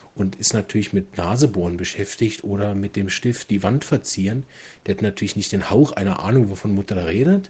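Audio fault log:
No fault is logged for this speech clip.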